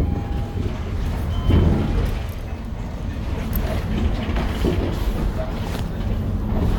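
The recording of sounds carries no audible technical faults at any point.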